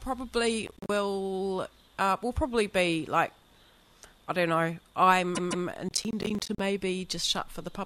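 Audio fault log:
0.67–0.89 s, processor overload crackle: a gritty burst of dropouts, roughly ten short silent gaps that fit buffers of around 10 ms arriving late. Unlike a repeat, no audio is replayed.
5.34–5.66 s, repeated frames: a 156.7 ms stretch plays two extra times, a stutter that adds 313.5 ms. Unlike overload crackle, whole identical chunks recur.
5.89–6.60 s, processor overload crackle: a longer tearing run of about twenty silent gaps, each around 10 ms, from buffers missing their deadlines. It stops once the load passes.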